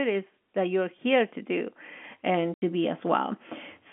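At 1.02 s, right after "is that you're", the microphone volume is stepped up by about 4 dB, and at 2.04 s, just after "to do", it rises again by about 3 dB. The software raised the input gain in single jumps, so the voice and the background noise get louder together at the same instant. A speaker naturally getting louder would not lift the room noise.

From 2.54 to 2.62 s, packet loss filled with silence cuts an 80 ms hole in the speech, which fits four lost 20 ms packets. It is a dead gap with hard edges, not the soft fade of a noise gate or a natural pause, and the narrow G.711 telephone band carries on unchanged on either side of the gap.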